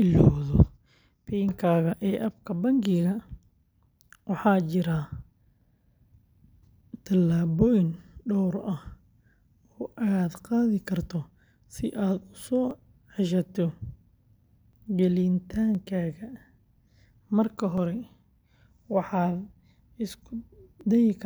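From 12.71 s to 20.81 s the speech has periodic USB or driver dropouts, repeating every 1.01 s. Something stalls the audio path at that interval, and around ten milliseconds of signal is skipped each time. Roughly ten regular ticks result, audible only while speech is present.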